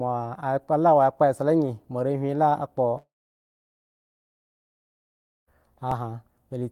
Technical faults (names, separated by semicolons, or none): long network dropout; underrun with held sample